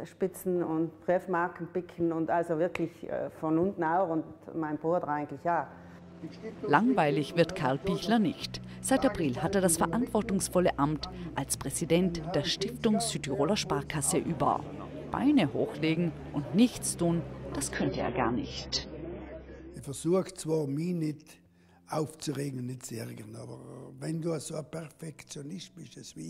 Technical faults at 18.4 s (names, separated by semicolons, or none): adaptive stream at a lower bitrate